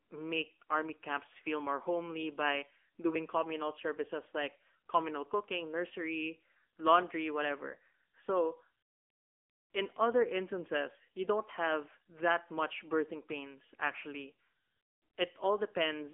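AMR narrowband mobile codec damage runs through the whole of this speech clip, from start to finish. The sound is confined to a telephone band of 250 Hz to 3.4 kHz, with nothing above 3.4 kHz. The voice is rebuilt from a vocal-tract model driven by a few pulses per short frame, so it comes across plainly buzzy and synthetic, which fits one of the lower AMR-NB modes at roughly 8 kbps.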